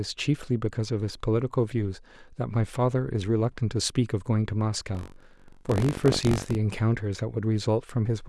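From 4.93 s to 6.55 s, the speech takes on a robotic rattle. This is buffer tearing. The writing program and the playback hardware have drifted out of step, so their positions cross inside each buffer. A small slice of every period, about 7 percent, replays audio from roughly 70 ms earlier. Hard joins sit on both sides of it. The rattle repeats at 46.9 Hz, which fits a 512-sample buffer.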